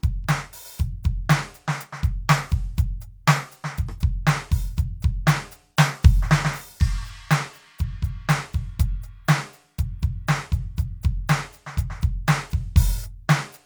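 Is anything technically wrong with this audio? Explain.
No, nothing technically wrong turns up anywhere in this music clip.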